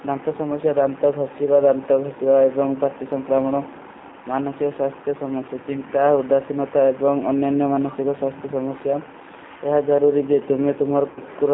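A speech recording passed through the G.729 codec throughout. The band sits between roughly 200 Hz and 3.7 kHz, with nothing above, and the codec damage is plainly audible: a rough, slightly synthetic grain from frames being rebuilt out of a filter, a pitch predictor and a few pulses. That fits G.729A at 8 kbit/s. A simple telephone band-limit would sound muffled but smooth, without this buzzy roughness. Near the end, from 11.10 to 11.20 s, there is VoIP packet loss concealed by the speech codec. The decoder keeps extending the last pitch and filter shape, so the speech stretches into a fading buzzy tone or coloured noise rather than dropping to silence as an unconcealed gap would. About 60 ms of audio is missing, which points to three lost packets. The sound also stays weak and distorted briefly after the packets return.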